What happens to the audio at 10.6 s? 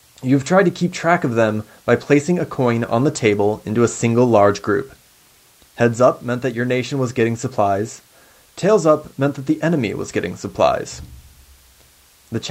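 Nothing goes wrong at 10.6 s: the speech there comes through intact, with the call path behaving as a normal Opus call does.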